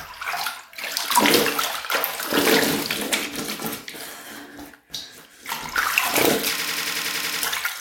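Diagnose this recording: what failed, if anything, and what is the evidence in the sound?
A system hang loop at the driver or buffer stage runs from 6.60 to 7.43 s. One 93 ms slice of sound repeats exactly nine times, giving a machine-gun stutter at 10.8 Hz, which fits a 4096-sample buffer. The host froze while the hardware kept replaying the same ring buffer, so about 0.7 s of real audio never arrived. Unlike a dropout or a glitchy skip, the repeats are identical and strictly periodic.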